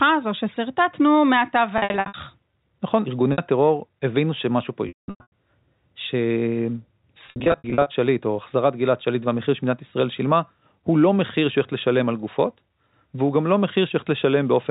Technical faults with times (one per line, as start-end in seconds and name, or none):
1.78-2.14 packet loss with pitch repetition
3.32-3.38 packet loss with pitch repetition
4.88-5.32 packet loss with pitch repetition
7.26-7.86 packet loss with pitch repetition